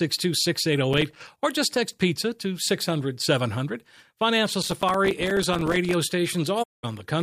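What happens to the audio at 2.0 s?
Nothing goes wrong at 2.0 s; the speech carries on intact, with no dropout, click, distortion or other audible fault at that moment.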